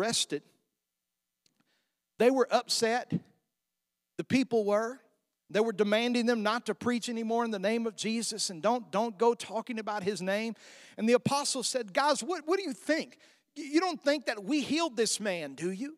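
Nothing in the speech stood out as a technical fault on listening.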